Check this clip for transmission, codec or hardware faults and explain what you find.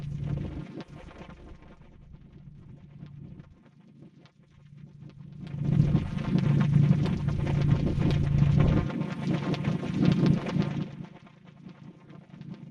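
Two faults are audible: zipper noise and DAB burbling.

From 5.38 to 5.80 s there is zipper noise. The level shifts by around 20 dB in that window. It is not a smooth ramp. It moves in 1 dB steps, about fifty of them a second, with nothing easing each jump. Every step puts a tiny discontinuity into the waveform. Strung together, those clicks form a fast ticking rasp riding on the sound while the level moves.

From 8.58 to 8.70 s there is DAB burbling. Reception errors have slipped past error correction into the MP2 data. Corrupted samples put short blips of noise into single sub-bands, and corrupted scale factors send sub-bands jumping in level for up to a frame. This brief burst points to several damaged frames, which fits a bit error rate of roughly half a percent. It is heard as a brief patch of noise blips and sub-band level jumps over the audio.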